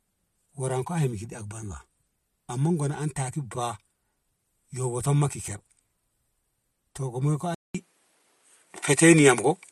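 At 7.55 s the recording likely switched to a poorer input device. After a 200 ms gap, the speech runs to the end with nothing above 11.6 kHz, a modest level shift, a faint new background noise, and a duller, narrower tone.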